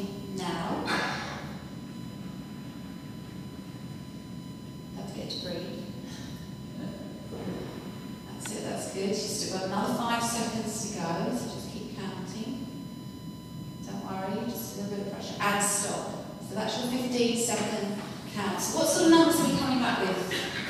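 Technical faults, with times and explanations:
Throughout, USB whine: current drawn by the USB bus in regular 1 ms frames is leaking into the audio path through shared power or ground, so the frame rate itself becomes an audible signal. The result is a steady whine fixed at 1 kHz, strongest at that fundamental, sitting roughly 25 dB below the main sound. Because it never shifts in pitch, it is heard as a thin constant tone.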